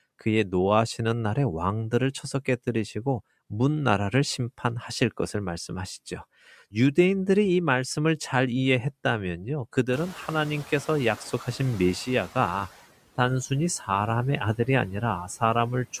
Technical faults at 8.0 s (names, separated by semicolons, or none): noise suppressor artifacts